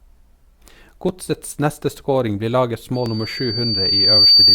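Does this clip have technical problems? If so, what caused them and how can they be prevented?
Yes. Overlap between stream segments causes brief skips at 1.09 s and 3.06 s. Where two segments' timestamps overlapped, the player trimmed audio that was never duplicated, so a few milliseconds vanish and the waveform jumps. The spacing fits segments about 2 s long. Aligning segment timestamps exactly at the packager prevents this.

Loudspeaker feedback squeal starts at 2.94 s and runs to the end. A 4.6 kHz tone swells over about a second and a half to roughly 10 dB above the speech, because the microphone re-amplified the loudspeaker it fed. Lowering monitor gain, repositioning the microphone, or notching that frequency prevents it.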